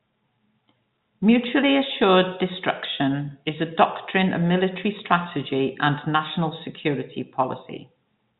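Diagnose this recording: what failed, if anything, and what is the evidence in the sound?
Nothing failed; no stage shows a fault here.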